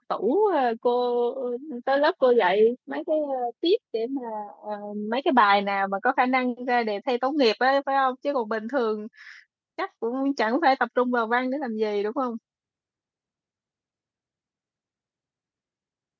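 No technical faults can be heard in the speech; it has passed through a call's microphone processing as normal, which trims the lowest bass and leaves nothing above 8 kHz.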